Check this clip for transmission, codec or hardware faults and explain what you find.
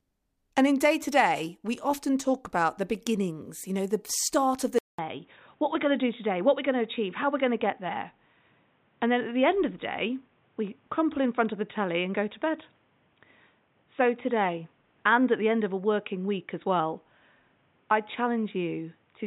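One fault is present. From 4.79 s to the end, the input switched to a poorer device, likely a change to another microphone or a headset's call profile. After a 200 ms gap, the speech turns dull and boxy at the same loudness over a faint new noise floor. A spectrogram shows everything above 3.8 kHz cut off sharply after the gap, and the waveform shows a brief flat stretch at the switch.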